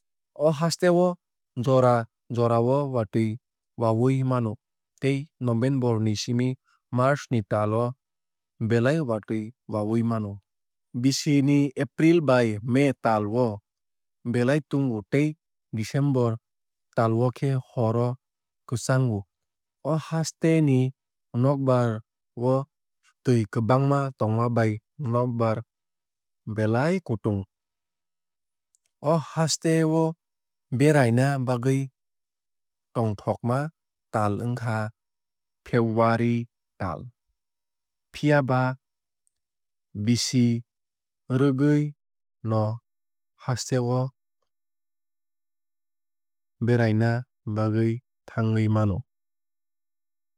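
Listening to this speech recording, nothing stood out as a technical problem at any point.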